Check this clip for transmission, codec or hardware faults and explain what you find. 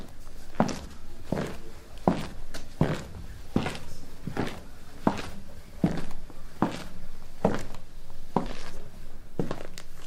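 I hear nothing wrong anywhere in this clip.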